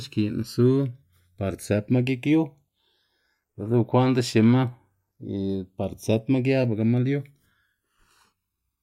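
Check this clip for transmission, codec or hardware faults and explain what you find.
Channels drifting apart, running throughout the speech. The left and right channels were evidently captured on devices with independent clocks that disagree by something like 200 parts per million, so the offset between them keeps growing and reaches around a millisecond by the end. When the channels are summed to mono, that changing delay forms comb-filter notches that slide gradually across the spectrum, heard as a slow, swirling flange over the whole clip.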